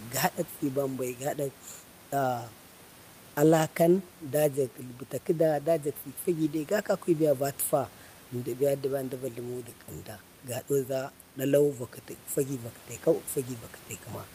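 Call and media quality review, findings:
Nothing stood out on listening to the speech, with only the room's own background noise audible at about 27 dB below it.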